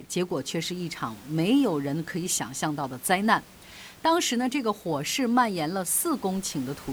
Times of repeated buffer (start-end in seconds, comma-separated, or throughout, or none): none